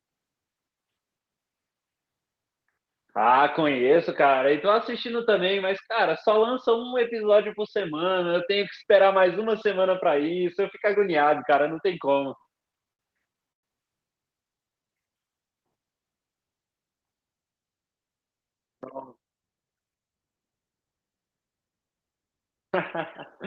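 Repeated stalls (stutter) run from 12.38 to 13.64 s. Late packets drained the jitter buffer twelve times, and each stall was bridged by extending the last sound for 265 ms in total, the longest gap 110 ms, so the speech drags and stutters. A jitter buffer slow-down follows at 14.52 to 14.88 s, where repeated pitch periods add 56 ms, stretching the speech to 86% speed at unchanged pitch.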